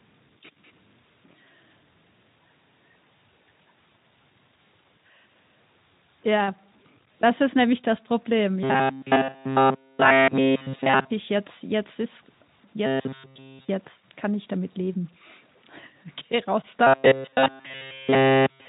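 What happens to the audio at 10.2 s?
From 8.63 to 11.10 s, new audio likely stopped arriving in time, so the player kept repeating one short buffer of about 7.5 ms, with nearly all of the real signal skipped. This is robotic sound from repeated short buffers: a rigid, metallic buzz fixed at 134 Hz.

Throughout the clip, and so at 10.2 s too, the signal sounds as if it was truncated to about 9 bits with no dither. This is low bit depth without dither. The error tracks the signal at about 35 dB below it, which adds a grainy, gritty distortion to quieter passages.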